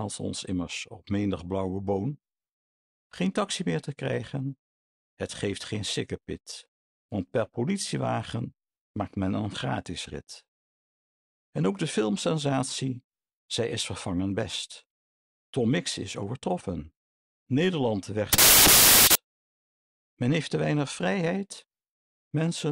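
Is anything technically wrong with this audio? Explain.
Yes. From 18.33 to 19.15 s the samples are built from the wrong bytes: the reader misassembles each value, so fast-changing low bits dominate. It sounds like loud, harsh broadband noise, unlike clipping, which keeps the underlying sound recognisable.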